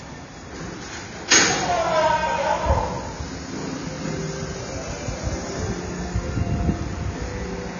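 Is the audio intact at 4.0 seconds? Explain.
No. AAC compression affects the whole clip, 4.0 seconds included. Nothing remains above 6.9 kHz, likely from low-bitrate AAC-LC coding near 24 kbps, so the sound is dull and smeared.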